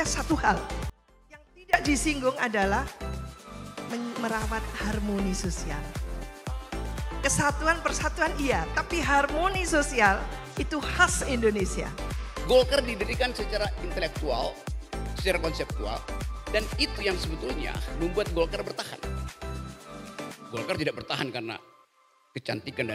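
At 0.90 s the sound drops out abruptly and stays gone until 1.73 s, an audio dropout to a faint residue lasting about 840 ms. The gap is not silent: a faint trace of the sound continues roughly 25 dB below its normal level, most likely because the signal was lost while the path downstream stayed live. On a waveform the envelope collapses to a thin band with hard edges; a spectrogram shows a sharp-sided, dimmed vertical block rather than a gradual fade.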